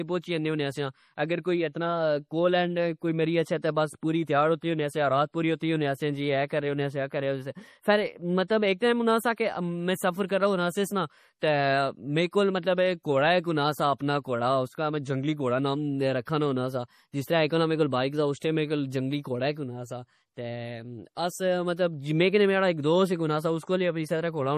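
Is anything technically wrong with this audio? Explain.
Yes. Throughout, the speech sounds watery and swirly, with nothing above 15.2 kHz. This is likely MP3 compression at a low bitrate, around 40 kbps, where weak frequency lines flicker between frames.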